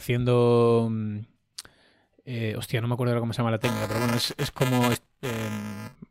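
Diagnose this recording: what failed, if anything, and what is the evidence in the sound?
Buffer tearing at the driver/buffer stage: right after "cómo se llama la", from 3.62 to 5.96 s, the speech picks up a robotic 375 Hz buzz, which fits a 128-sample buffer. Roughly a tenth of each period replays audio about 5 ms old, hard-spliced on both sides.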